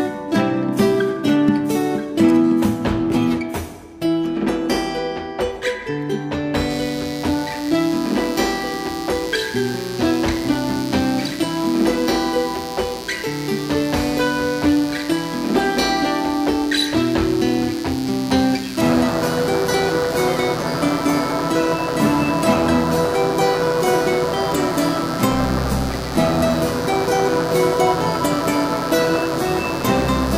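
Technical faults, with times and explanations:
6.70–30.37 s, mains buzz: a steady, raspy buzz enters at 6.70 s and continues to the end of the clip. It sits roughly 15 dB below the programme level. Its fundamental is at 60 Hz, with a dense series of harmonics running up into the several-kilohertz range. That spectrum comes from sharp switching spikes recurring twice per mains cycle, which points to dimmer or rectifier interference or an unshielded line coupling into the signal path.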